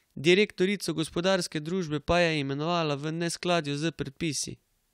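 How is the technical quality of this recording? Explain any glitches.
No glitches or technical faults can be heard here.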